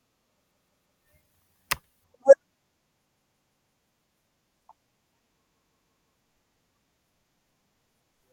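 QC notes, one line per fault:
0.51–1.02 s, repeated buffer: a 171 ms slice of speech stutters, heard four times with hard joins, as late audio made the device replay its last buffer.
3.07–3.76 s, repeated buffer: the same 171 ms stutter, now five plays in a row, which fits an 8192-sample buffer replayed while new audio failed to arrive.
5.46–6.14 s, repeated buffer: another five-fold 171 ms stutter with abrupt seams; playback stalls on the previous buffer, and the speech then continues with nothing apparently skipped.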